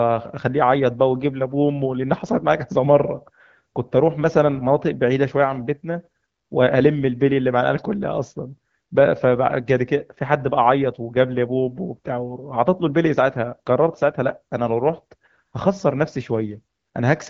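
Nothing stood out on listening to this speech clip, which carries the band-limited character of AMR wideband (HD Voice) coding at 12.65 kbit/s, with nothing above about 7.3 kHz.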